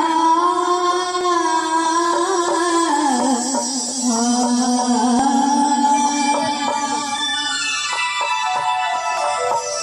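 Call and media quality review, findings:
Overlap between stream segments: clicks or tiny skips at 1.21–1.23, 3.20, 5.19, 7.18 and 9.17 s, repeating every 2 s at segment boundaries. Segmenter or player timestamps overlap, so 12–20 ms of real audio is trimmed and the waveform jumps.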